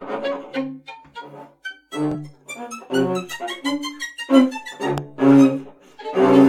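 At 2.12 s the music catches in a brief Bluetooth stutter lasting until 2.16 s. The receiver ran short of data and replayed its last buffered slice, which points to a single lost packet of about 23 ms. Because only one slice repeats, it is heard as a quick hiccup, not a buzz. Unlike a plain dropout, there is no silence. After the catch the music resumes further on, as if it had kept playing underneath.

From 4.98 to 5.00 s a single loud pop sits on top of the music, peaking roughly 10 dB above it. It most likely comes from a sudden voltage step, such as a plug, a switch or static, that is added to the signal and shaped by the circuits after it. Unlike the stutter, nothing is repeated or skipped. The music runs on intact beneath one sharp thump.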